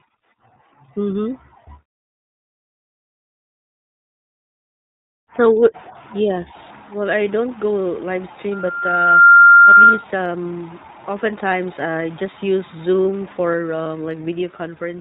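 iLBC codec, throughout the clip: the speech is band-limited to 4 kHz and plainly rough and synthetic, consistent with iLBC's 15.2 kbps mode coding each 20 ms frame independently.

Loudspeaker feedback squeal, 8.52 to 10.04 s: the microphone re-amplifies its own loudspeaker, so a 1.4 kHz tone swells over under a second to well above the speech.

Lost iLBC frames, 13.84 to 13.87 s: about 20 ms of audio is missing, and the decoder fills it by repeating the last pitch cycle, producing a brief buzzy held vowel before the speech resumes almost at once.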